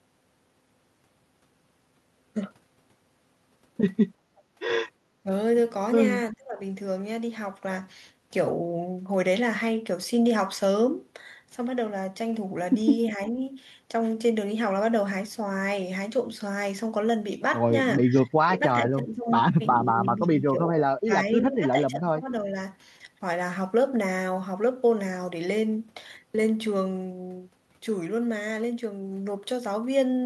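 At 4.36 s there's a brief, very faint delayed copy of the speech, about 354 ms behind, lasting only a few hundredths of a second. That's likely an echo leak: the far end's canceller let a scrap of its loudspeaker pickup slip back.

Then comes speech suppressed in double talk, likely from the canceller ducking this talker while both sides spoke. The speech dips at 5.23 s, hard at 6.32 s, lightly at 13.18 s and 18.02 s, then clearly at 18.45 s, and runs patchy from 19.69 to 22.56 s.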